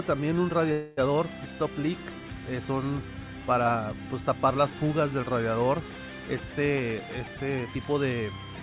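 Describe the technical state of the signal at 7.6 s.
At 7.6 s a jitter buffer speed-up runs from 6.71 to 7.94 s. Pitch-period chunks totalling about a third of a second are cut to drain excess delay. The audio plays at 119% speed, hurried at unchanged pitch. A spectrogram shows steady harmonic spacing with events compressed in time.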